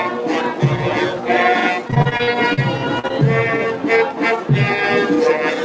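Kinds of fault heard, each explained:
Noise suppressor applied to music or sounds: a suppressor built for speech stays on for the whole clip, treating held tones and decaying tails as noise and turning them down by about 5 dB while attacks pass, so the level pumps; nothing goes missing, unlike packet loss.
Repeated packet loss (robotic sound): from 1.88 to 2.59 s, eight gaps of up to 42 ms are each patched by continuing the sound before them, about a quarter of that stretch, giving a choppy texture with pieces missing from holes arriving in a rapid run.
Short concealed packet loss: two separate holes, about 40 ms at 2.99 to 3.05 s and 20 ms at 3.07 to 3.12 s, are filled by extending the last sound and blended back in, heard as a brief smear or wobble rather than a sustained robotic stretch.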